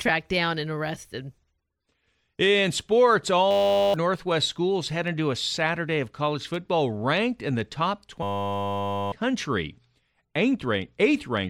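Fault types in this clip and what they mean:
System hang loop: The speech gives way to a steady, flat buzz with a pitch of 100 Hz, from 3.51 to 3.94 s and again, longer, from 8.23 to 9.12 s. The audio driver or system stalled while the sound hardware kept replaying the same 10 ms ring buffer, so one tiny slice repeats exactly at 100 times per second. The real speech underneath is gone: roughly 0.4 s at the first hang and about a second at the second.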